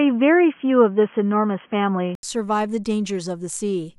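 From the start up to about 2.23 s the speech sounds boxy and dull, with nothing above 3.3 kHz, and there's a faint new background noise sitting roughly 40 dB under the signal. Then comes a gap of about 80 ms, and the sound opens up again with the level changing by around 5 dB. That's most likely an input switched to a poorer device, something like a headset's call profile, before the system swapped back to the better microphone.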